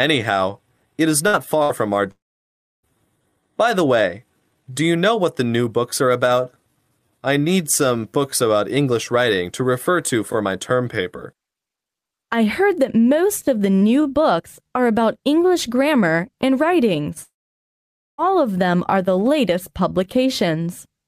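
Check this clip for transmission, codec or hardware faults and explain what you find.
Two kinds of transmission fault are audible, both caused by missing network audio. Neither points to a codec or hardware problem.

Burst of packet loss, at 1.27 to 1.36 s and 1.63 to 1.72 s: the sound briefly freezes into a short held buzz or hiss that fades, then jumps ahead. About 60 ms of audio was lost each time, and the receiver stretched the last sound to cover the gap.

Long network dropout, at 2.11 to 2.86 s and 17.23 to 18.21 s: the sound smears into a fading buzz or hiss, then goes silent for about 0.66 s and 0.89 s respectively before resuming further on. This is likely a long network dropout, where roughly 0.7 s and 1 s of audio never arrived and concealment gave way to silence.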